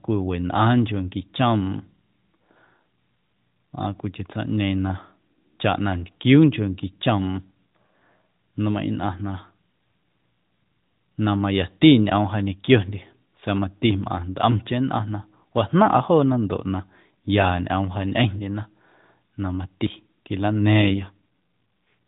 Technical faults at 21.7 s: AMR rate drop

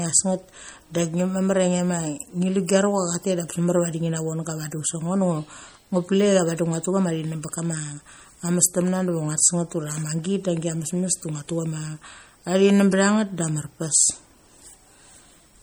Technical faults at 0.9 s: MP3 compression

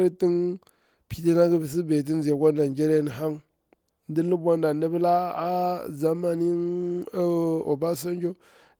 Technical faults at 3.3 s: none

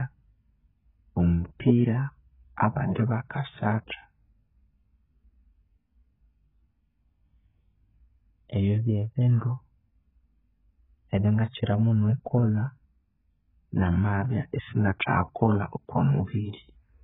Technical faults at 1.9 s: AAC compression

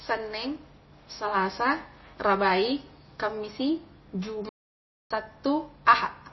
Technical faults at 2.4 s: MP3 compression

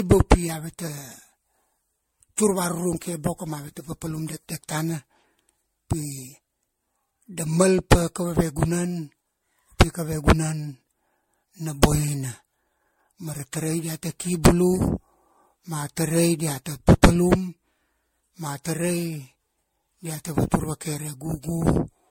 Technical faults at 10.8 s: generation loss

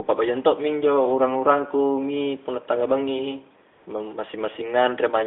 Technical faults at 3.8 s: AMR comfort noise

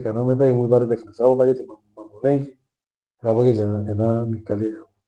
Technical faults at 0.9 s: none

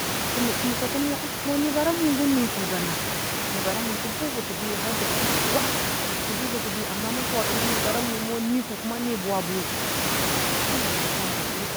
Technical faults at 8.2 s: none

